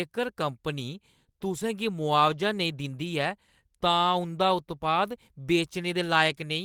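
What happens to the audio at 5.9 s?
Nothing goes wrong at 5.9 s: the speech carries on intact through that moment, with no dropout, click or other fault.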